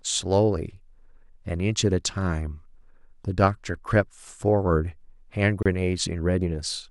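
At 5.63 to 5.66 s, a gap at a join of encoded pieces: a 29 ms gap with smeared edges, after which the speech resumes exactly where it stopped, unlike a dropout.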